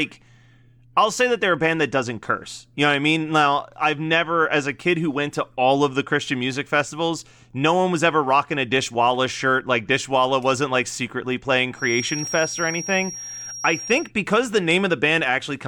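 Just after "wasn't like secretly playing", from 11.72 to 14.11 s, a thin feedback whistle holds at 5.6 kHz. A speaker-to-microphone loop likely sits just short of runaway.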